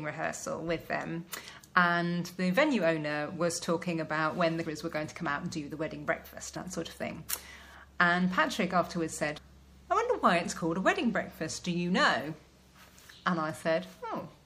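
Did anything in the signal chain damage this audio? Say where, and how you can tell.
Yes. The whole clip sounds watery and swirly, with a dulled top end, metallic chirps on bright, noisy sounds, and softened attacks. That points to the codec stage, likely MP3 compression at a low rate, which fits an encode around 64 kbps. With too few bits, the encoder cut the treble at a fixed point and dropped weak frequency lines. Those lines flicker on and off from frame to frame, producing the shimmering, underwater texture heard throughout.

At 4.64 s, 6.55 s and 9.37 s, the audio jumps ahead. About 300 ms goes missing at the first point and about 200 ms at each of the other two. Each join is a brief smeared blip rather than a sharp click. That is the signature of compressed frames skipped at decode or in storage, with whole blocks missing or rejected as damaged. The skipped spans fit multiples of roughly 26 ms MP3 frames. 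Overlap between neighbouring frames blurs each seam.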